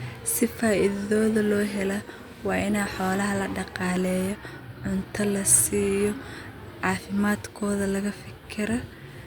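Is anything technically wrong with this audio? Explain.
No, nothing technically wrong is audible in this speech recording.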